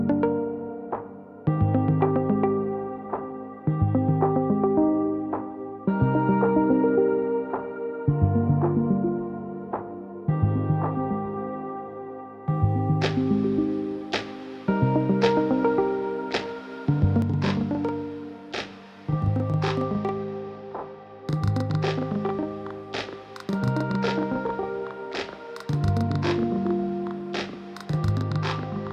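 From 17.22 s to the end of the clip, one channel runs 40 ms behind the other, as if it were held back by an extra buffer, and the two channels are then summed to mono. That channel delay causes doubling: the late copy doesn't blend into the original but arrives as a distinct second image at equal level, so every onset in the sound is followed 40 ms later by a same-strength slap echo.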